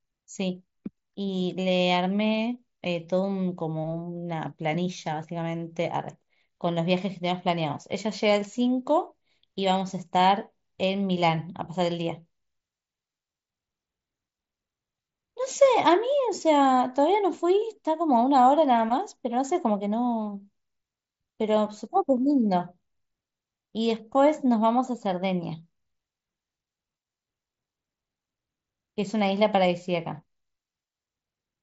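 Nothing in this speech recording goes wrong; it comes over a Bluetooth headset link using the mSBC codec, which keeps the sound within its usual 8 kHz ceiling.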